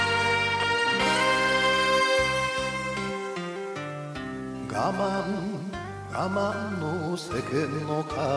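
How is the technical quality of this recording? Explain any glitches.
No glitches or technical faults are audible anywhere here.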